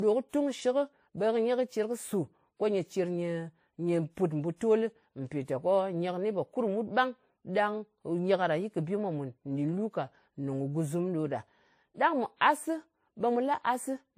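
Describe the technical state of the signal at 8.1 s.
At 8.1 s the speech has a layered quality: coding artefacts from different codecs sit on top of each other, and nothing is present above 15.2 kHz. This is transcoding between lossy codecs, present throughout the clip. The sound points to a low-bitrate MP3 stage, likely re-encoded afterwards with WMA. The second codec spends its bits preserving the first codec's damage and adds its own, so both sets of artefacts are heard together.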